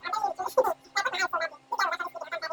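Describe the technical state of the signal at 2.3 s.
At 2.3 s the wrong sample rate fault is present, as it is throughout the speech: samples are played back far faster than they were captured, with no rate conversion, consistent with 16 kHz material played at 44.1 kHz. Everything runs 2.76 times too fast and about 17.6 semitones high, giving a squeaky, hurried sound.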